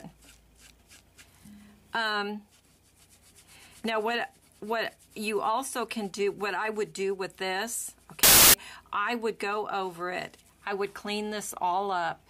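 From 8.23 to 8.54 s, samples were built from the wrong bytes: mis-assembled low bits became each value's bulk, producing a burst of loud, harsh broadband noise.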